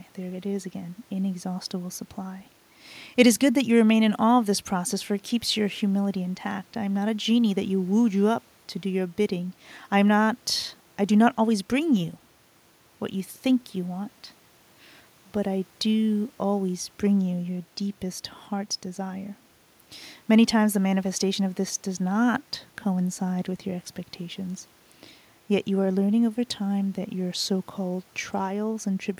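No technical faults can be heard anywhere in the speech. The room noise around the microphone sits about 38 dB below the speech, and it belongs to the recording rather than to any fault of the system.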